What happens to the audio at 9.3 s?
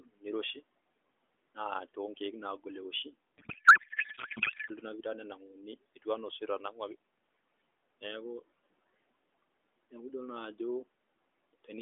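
Nothing goes wrong at 9.3 s; the speech there comes through intact, with narrowband phone-line quality and faint room noise.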